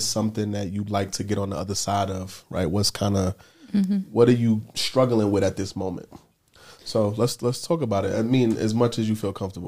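At 3.84 s, just after "kind of", a sharp snap cuts across the speech. It is an electrical switching spike, lasting only a couple of milliseconds and peaking at about -20 dBFS. A nearby switch or motor likely arced, and the audio line picked it up.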